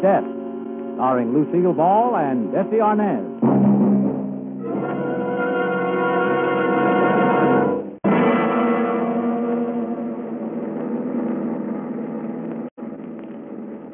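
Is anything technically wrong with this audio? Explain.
Yes. Aliasing runs throughout the clip. The audio sounds like it was reduced to about 6 kHz sampling with no low-pass filter first, so content above 3 kHz folds back below it. This gives gritty, metallic false tones, quieter than the main sound, and a spectrum packed right up to 3 kHz.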